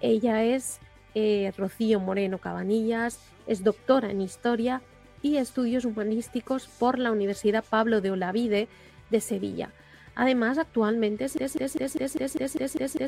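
At 11.38 s the sound locks into a broken-record loop: one 200 ms fragment repeats exactly, nine times back to back, through to the end. The stream likely stalled and resent its last fragment, losing the audio that should have followed. Unlike an echo, nothing decays or overlaps.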